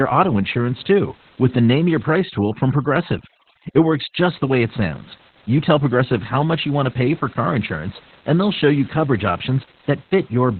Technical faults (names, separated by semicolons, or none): Opus voice compression; overdone noise removal